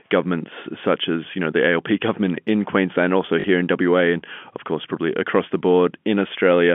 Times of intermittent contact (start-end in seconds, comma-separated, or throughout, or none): none